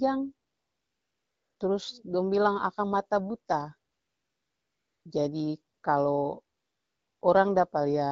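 A speech recording over an AMR wideband (HD Voice) link with AMR comfort noise in four pauses: 0.47 to 1.59 s, 3.91 to 5.05 s, a brief 5.73 to 5.83 s gap, and 6.55 to 7.21 s. In each, the sender treated the talker as silent and stopped sending speech frames, so the receiver substituted smooth synthetic noise for the real background, audibly switching in and out at each boundary. The lightly coded speech between pauses fits a mid-rate AMR-WB mode.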